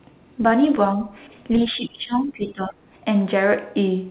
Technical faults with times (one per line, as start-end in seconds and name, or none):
1.69-2.85 speech suppressed in double talk